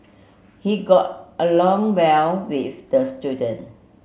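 Speech recording, no technical faults detected.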